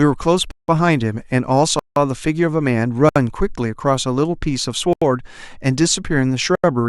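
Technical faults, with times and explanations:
0.51 to 6.64 s, blocks of digital silence at 0.51, 1.79, 3.09, 4.93 and 6.55 s. The speech cuts to silence with no fade, leaving short holes of 170 ms twice, then 67, 85 and 85 ms. Most lengths fit missed 8192- and 4096-sample buffers.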